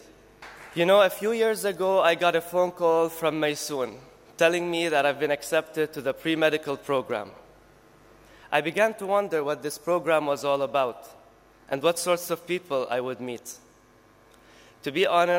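From start to finish, the converter's timing reference wanders, so each sample is captured a little before or after its proper instant. This is sample clock jitter, on the order of a few microseconds. Because a timing slip matters most where the waveform changes fastest, the resulting error follows the signal, sitting roughly 35 dB below it. It comes through as a grainy hiss that thickens on loud, bright passages and drops away when the audio falls quiet.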